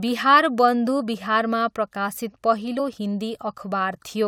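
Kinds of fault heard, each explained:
Compressed frames skipped: whole frames of the coded speech never play, so the audio jumps forward. It happens near 0.99 s and 2.78 s. Each jump loses roughly 20 ms.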